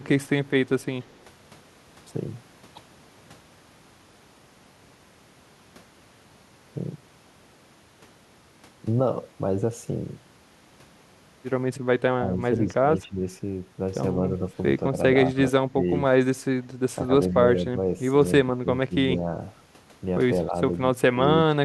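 Speech with two faults. From 0.49 to 1.16 s a very faint copy trails the voice by 174 ms: an echo leak, likely loudspeaker sound the echo canceller missed. Its fixed delay sets it apart from diffuse room reverb. At 12.1–13.2, 14.91–15.86, 17.07–17.78, 18.45–19.28, 20.50–20.54 and 21.12–21.64 s the voice dips or breaks in short pieces, by up to about 20 dB: speech suppressed in double talk, likely the canceller turning down overlapping talk. These are partial level dips rather than the clean silent gaps of lost packets.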